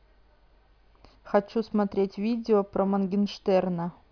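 No technical faults can be heard anywhere in the speech.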